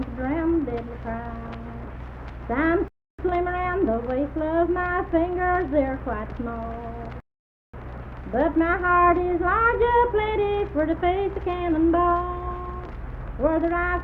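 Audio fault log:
2.88–3.19 s and 7.20–7.74 s, rebuffering stall: the audio halts into silence for about 0.30 s and then 0.53 s, then picks up at exactly the point where it stopped, because playback ran out of downloaded data and waited for more. Unlike a dropout, which blanks part of the signal and skips ahead, nothing is missing here. The material is whole on either side, and the clip simply runs longer by the length of each gap.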